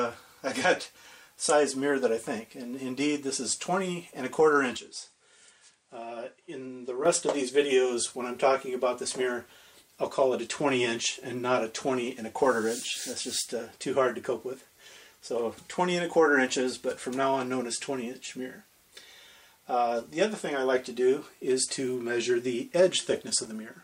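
An input switched to a poorer device from 4.77 s to 7.05 s, most likely a change to a different microphone or a headset's call profile in mid-recording. The sound turns duller and smaller at once, with no silence at the switch. Nothing reaches above 9.8 kHz, so the top end is cut away. The level drops by roughly 5 dB, and a faint new background noise sits far beneath the signal. At 7.05 s the fuller, brighter sound returns.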